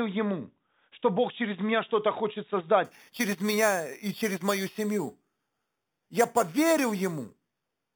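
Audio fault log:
2.85–7.95 s, imaging from sample-and-hold upsampling: a metallic fizz sits above the speech and rises and falls with its level, at about 14 dB below the signal. Each sample was held and repeated with no smoothing filter, which fits a rate raised from 8 kHz to 44.1 kHz. That stepped waveform leaves mirrored copies of the spectrum, with the first image filling roughly 4 kHz to 8 kHz.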